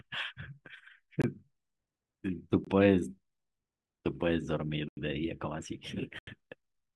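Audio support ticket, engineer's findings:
Block of digital silence, four dropouts in speech: 1.22–1.24 s and 2.65–2.67 s (21 ms gaps), 4.89–4.97 s and 6.19–6.27 s (85 ms holes). Flat line on waveform. Output buffer likely not filled in time; lengths fit 1024- and 4096-sample blocks.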